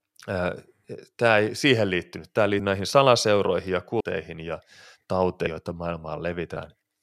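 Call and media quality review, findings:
Compressed frames skipped at 0.84, 2.59, 4.00, 5.46 and 6.56 s; decoder or file damage. Speech jumps ahead roughly 100 to 200 ms each time, whole 26.1 ms frames.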